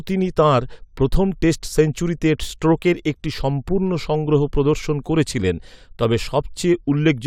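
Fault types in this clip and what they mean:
No audible technical faults turn up in this speech.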